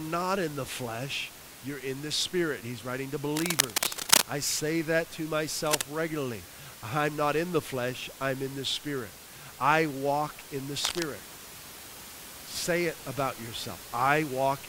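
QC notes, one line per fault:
3.37–4.25 s, 5.66–5.83 s and 10.84–11.02 s: cable scratch noise. Dense, ragged rustling after "writing to", "I say that to" and "I walk in the". It is loudest first and faintest last. It is likely a worn cable or connector being moved so its contact resistance jumps.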